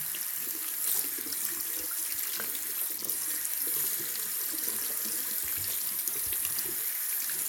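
A recording of everyday sounds, with no technical fault to be heard anywhere in it. Nothing in the audio needs a time mark or a fix.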